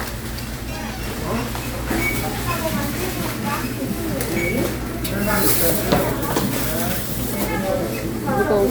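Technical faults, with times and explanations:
Nothing technical goes wrong anywhere in this recording of sounds, so there's nothing here to flag.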